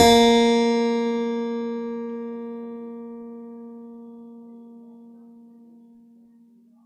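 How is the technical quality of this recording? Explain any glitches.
The music suffers from generation loss running through the whole clip. It sounds swirly, smeared and hollow, with blurred attacks, likely from being lossy-encoded around four times over, and the character fits AAC-LC at 64 kbit/s. Each re-encode quantises on a shifted frame grid, so errors stack. On a spectrogram, the upper bands show patchy holes and flickering, and the waveform's transients look softened.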